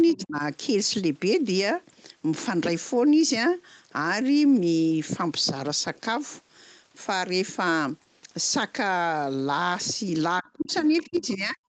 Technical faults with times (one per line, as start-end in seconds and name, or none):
0.12-0.17 other side's voice leaking through
0.12-0.42 speech suppressed in double talk
10.41-11.59 speech suppressed in double talk
10.60-11.26 other side's voice leaking through